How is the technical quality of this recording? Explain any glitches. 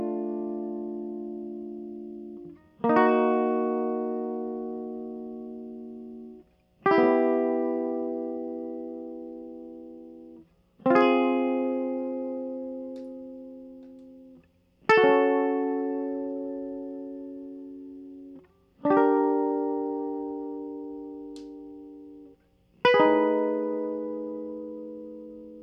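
No technical glitches can be heard anywhere in this music recording. Nothing interrupts or disturbs the audio at any point, so there are no faults to explain.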